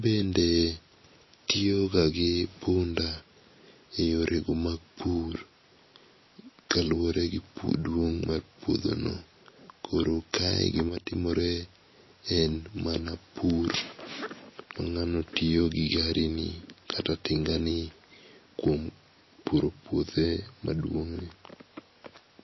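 Throughout, the speech sounds watery and swirly, with a metallic edge on s sounds and nothing above 5.8 kHz. The likely cause is heavy MP3 compression, consistent with a bitrate around 24 kbps, where the encoder cuts the treble and weak frequency components flicker between frames.

From 10.89 to 11.13 s, the sound drops abruptly by about 6 dB, then returns. This is likely one channel dropping out: with one stereo side lost, the mono sum keeps only half of what both channels shared.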